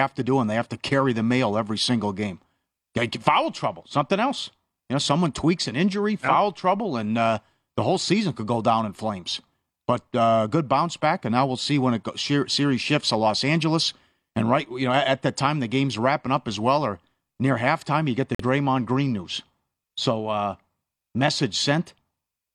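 A short squeaky burst of noise cuts through the speech from 11.53 to 11.62 s, right after "back and now we'll" and before "when it go series", peaking at roughly -25 dBFS. This is a corrupt frame decoded: bit errors in a few compressed frames were played anyway, so misread gains and codes scattered energy across wrong frequencies for about 90 ms.

At 18.34 s, just after "halftime you get the", the audio drops abruptly into silence until 18.45 s. This is a corrupt frame muted: the decoder rejected damaged frames and the player filled the gap with silence. The roughly 100 ms hole fits about two frames, and timing stays intact.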